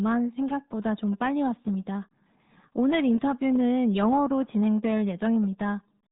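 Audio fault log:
Throughout: RealAudio 14.4 codec. The speech is cut off above 3.8 kHz and heavily damaged, sounding muffled with a gargling, bubbling texture. This fits a dial-up-era speech coder squeezing audio to about 8 kbit/s, too few bits to model the signal faithfully. A simple low-pass filter or telephone band limit would only dull the sound. Here the remaining band itself sounds gargly, which marks it as codec damage.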